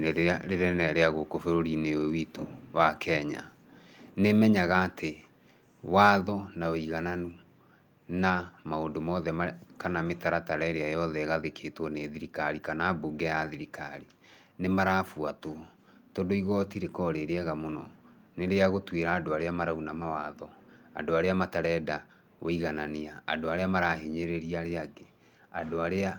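At 6.01 to 6.09 s the input gain appears to have been set higher than the converter could handle, and the likely result is microphone overload: the loudest peaks of the speech run past full scale by about 2 dB and have their tops sheared flat. Only a small fraction of samples, roughly one percent, are cut in that stretch, but it is enough to give the sound a brief harsh, crackly edge on the strongest syllable.

Right after that, at 6.21 s, the input level drops in a single step of about 2 dB. This is a microphone volume stepped down event, likely the call software reacting to the clipped peak it had just detected and pulling the device's input volume back. The speech and the background beneath it both become slightly quieter at once, with no gradual fade, so the change lands as a small, sudden dip in overall level.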